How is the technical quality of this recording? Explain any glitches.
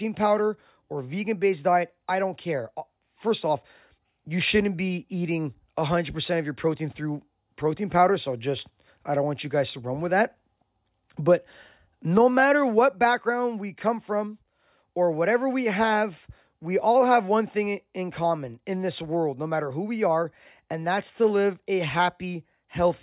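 Nothing in the speech stood out as a technical problem on listening, so there are no glitches to explain.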